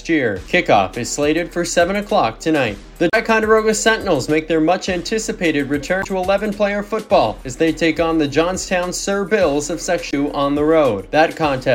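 Damaged data in a compressed stream hits three times: at 3.10 to 3.14 s, 6.00 to 6.06 s and 10.10 to 10.14 s. Each time, corrupted bytes reach the decoder, which misreads the affected frames, loses its place in the stream and has to hunt for the next valid frame header before it can resume. In the sound, each event is a brief chirp, squawk, click or short hole, 40 to 70 ms long, that breaks sharply into the audio.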